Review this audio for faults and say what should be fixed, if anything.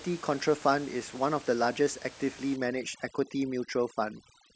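From 2.56 s to the end at 4.56 s there is overdone noise removal: the denoiser, set too strong, shuts off frequency bands it mistakes for noise, so room noise about 20 dB below the speech turns to twinkling near-silence and quiet speech parts are cut away with it. Unlike codec artefacts, the flutter sits in pauses. Lowering the reduction amount would prevent it.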